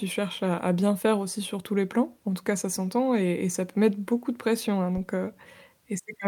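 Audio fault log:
4.97–5.13 s, phantom power thump: just after "beaucoup de pression hein", a deep, low thud hits the speech and dies away within about 34 ms. A supply voltage switched on or off on a live input sends a sudden step through the coupling capacitors.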